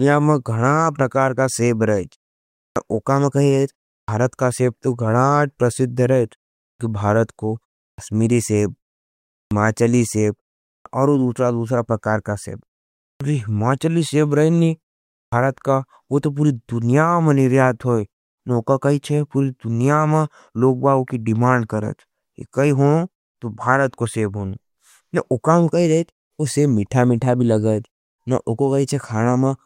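The output device drops into sleep during each pause and needs roughly 75 to 85 ms to wake, so this speech recording has a clipped start after a pause at 2.68, 4.0 (after "में कही रहेज"), 6.71, 7.9, 9.43, 10.78, 13.13 and 15.25 s, where speech begins abruptly, missing its opening sounds.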